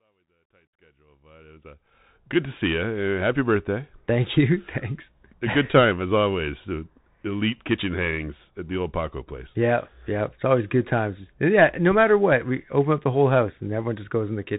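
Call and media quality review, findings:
Bluetooth CVSD headset codec, whole clip. Speech band-limited, nothing above 4 kHz; sibilants scratchy, granular hiss under speech, loud high-frequency peaks distorting, plainly audible. Consistent with CVSD at 64 kbps: one-bit up/down steps with an adaptive step size that can't track fast loud transients. Fade-in from start to 2.37 s is smooth and clickless, not a fault. Probable component: headset link on SCO/CVSD profile.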